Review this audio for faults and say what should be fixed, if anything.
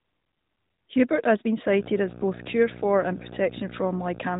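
Video or display buzz runs from 1.67 s, just after "has also been", to the end: a 59.94 Hz field-rate buzz with hash above it and a 15.7 kHz line-rate whine, fairly loud at roughly 10 dB below the speech, coupled in from a screen or video cable. Keep audio cables away from displays and video leads, and use balanced or isolated connections.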